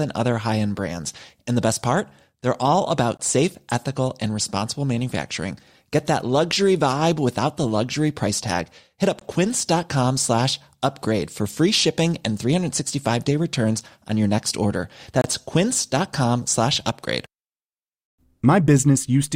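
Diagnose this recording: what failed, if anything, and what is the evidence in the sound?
Playback stage, gap between stream segments: hard-edged silences at 3.17–3.20, 9.19–9.21 and 15.21–15.24 s, 6 s apart, from segment timestamp holes. They show as flat waveform dropouts and blank vertical spectrogram stripes.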